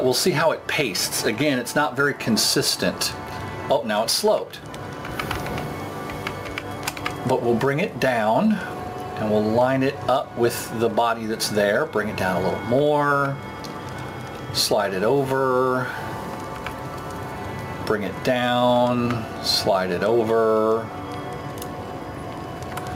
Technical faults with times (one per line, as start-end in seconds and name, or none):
0.00-22.95 gain pumping